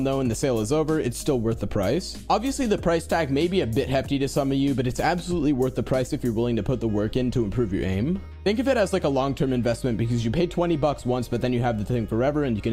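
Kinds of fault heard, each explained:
No technical faults can be heard anywhere in the signal.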